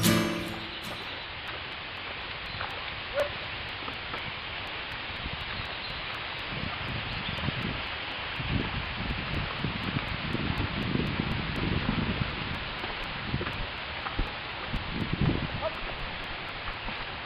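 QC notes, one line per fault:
0.25–16.98 s, periodic USB or driver dropouts: a short tick recurs every 0.246 s, about four per second, roughly seventy in all, and is heard only while signal is present. Each time, a few milliseconds of audio are skipped outright rather than replaced with silence, so the waveform jumps across the gap and the discontinuity clicks. The strict regularity points to a background process stalling the USB bus or audio driver on a fixed schedule.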